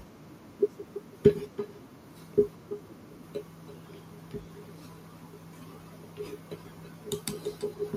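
From start to finish the speech carries echo with no canceller. The far end's loudspeaker feeds its microphone, and nothing removes the return. Each phrase comes back about 300 ms later, roughly 12 dB quieter and thinner than the original.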